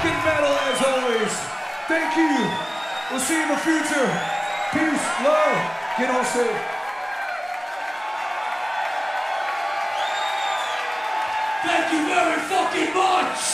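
No technical faults to report; nothing in the audio needs flagging at any point.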